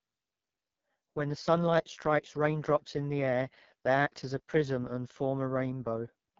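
From start to finish, the speech passes through the AMR wideband (HD Voice) codec at heavy compression that points to its lowest 6.6 kbit/s mode. The pulse-driven vocal tract model lacks bits, leaving the speech rough and raspy, with nothing above 6.9 kHz.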